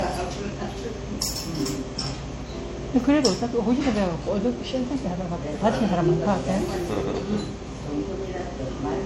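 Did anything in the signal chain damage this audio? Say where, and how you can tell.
Yes. The codec stage damaged it. Nothing sounds above 16.2 kHz. The smeared, swirly texture of a low-rate HE-AAC encode sits under the grittier ringing of MP3. That mix points to transcoding between lossy codecs, likely HE-AAC into MP3.

The recording or buffer stage also dropped sound. There are skips at 1.36, 3.81 and 6.26 s, about 2.45 s apart. Each one removes around 50 ms, and the two sides butt together. This is audio missing between chunks, likely lost as each 2.5 s chunk closes.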